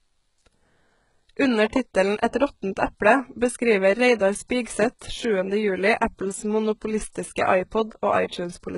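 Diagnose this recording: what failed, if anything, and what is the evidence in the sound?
The codec stage is where it went wrong, and it's there for the whole clip. The speech treble has a synthetic sheen: s sounds come out gritty and lispy, and there's nothing at all above about 11.1 kHz. That points to HE-AAC compression, likely at a very low rate, which fits something around 12 kbps. The codec keeps only the lower band and fakes the top by copying it upward, so the treble harmonics don't line up.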